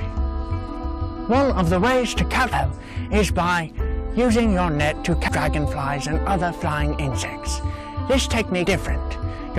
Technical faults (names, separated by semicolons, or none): damaged data in a compressed stream